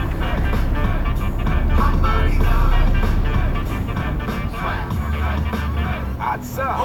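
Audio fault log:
No faults to log.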